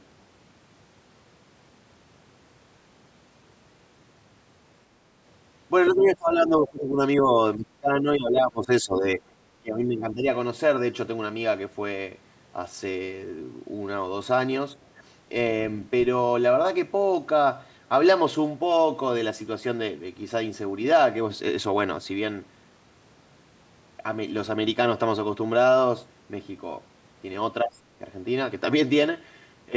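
Between 5.91 and 10.25 s the speech repeatedly dips: 5.91–7.0, 7.18–7.38, 7.56–9.3 and 9.61–10.25 s, with a brief dip again at 27.64–27.75 s. The deepest cuts reach around 20 dB. This is likely speech suppressed in double talk, where the echo canceller turns down the near talker along with the far-end echo.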